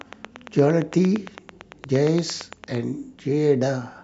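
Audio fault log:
0.01–2.76 s, train of clicks: a steady ticking runs under the speech from the very start, around thirty sharp pops at an even pace of about 8.8 per second, each peaking roughly 5 dB above the speech so they cut through it and stand out plainly in the gaps. The clicks share one shape and fall at regular spacing, so one source is repeatedly injecting a pulse, likely electrical interference from nearby equipment or a faulty connection or power supply.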